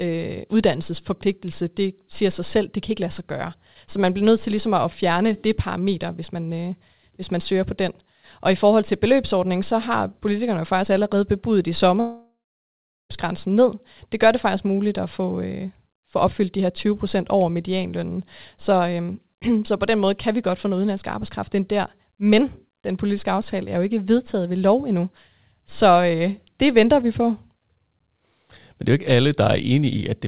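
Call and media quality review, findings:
Speech gap 12.0–13.11 s, likely a long network dropout upstream of the jitter buffer. Last sound stretched into a fading buzz, then about 0.76 s of silence. Speech resumes mid-flow with roughly 1.1 s missing. Audio is band-limited below 4 kHz throughout, consistent with the G.711 mu-law call path. A short packet-loss glitch differs: concealment briefly masks it, with no silent stretch. A deliberate mute differs: it cuts cleanly, with no concealment tail.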